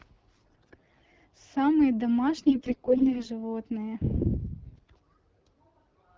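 AMR bit errors at 0.33 to 1.08 s, 2.37 to 3.26 s and 4.64 to 4.93 s flip unprotected frame bits, misplacing excitation pulses so the speech turns hoarse, scratchy and gargly, worst early.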